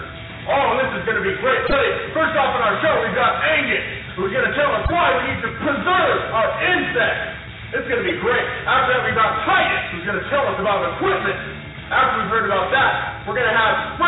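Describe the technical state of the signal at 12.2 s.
At 12.2 s the signal is intact, with no dropout, clipping, glitch or other audible fault at that moment.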